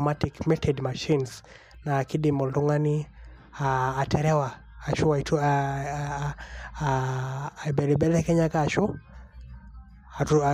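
No technical faults are audible anywhere in the speech recording.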